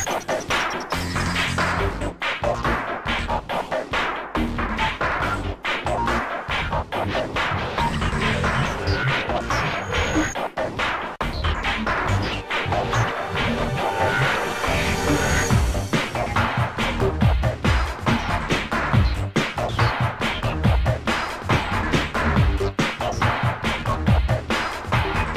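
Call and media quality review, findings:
De-emphasis applied wrongly, 1.73 s onward: muffled, dull sound. Surplus treble-cut filter sits on unboosted signal, about 8 dB down at 10 kHz. Spectrogram shows highs fading smoothly.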